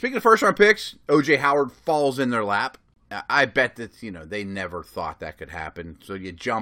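At 2.94 to 2.96 s, between "falls in their lap" and "I bet that you", a hard-edged silence of about 24 ms appears: a gap between stream segments, where mismatched timestamps left a hole the player filled with silence. Unlike a dropout, no speech is missing; time was added.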